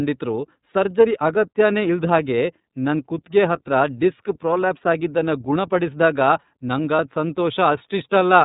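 iLBC codec damage runs through the whole speech clip. The narrowband coding removes everything above 4 kHz, so the sound is dull and boxy, and the damage is plainly audible as a rough, slightly synthetic edge. iLBC codes each frame's excitation on its own. Here the sound points to the 30 ms frame mode, which fits iLBC's 13.33 kbps setting. That coarse excitation coding is what gives the sound its gritty texture.

Lost iLBC frames occur at 6.96 to 7.0 s, a gap of about 30 ms that fits a single dropped frame. The decoder fills the hole by repeating the last pitch cycle blended with noise, which is heard as a brief held, faintly buzzy vowel-like smear. Because each iLBC frame decodes independently, the speech snaps back to normal almost immediately after the gap.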